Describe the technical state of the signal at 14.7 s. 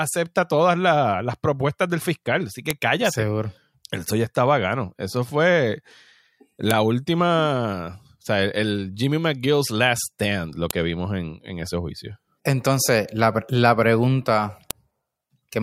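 At 14.71 s, just after "la pregunta", there is a file header played as audio. It is a single sharp, loud click lasting about a millisecond. The speech was assembled from separate WAV pieces, here about 4 s each. At this join the header bytes were not stripped. Those few dozen bytes of metadata were decoded as sample values. They bear no relation to the speech around them, so they produce an abrupt snap.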